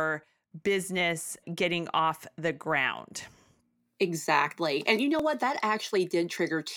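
Overlap between stream segments at 1.21 s (just before "getting off the"), 3.20 s and 5.19 s (just after "you know"): adjacent 2-second segments claim overlapping time, so the player trims about 16 to 19 milliseconds of speech that was never duplicated. The waveform jumps, giving a brief skip every two seconds.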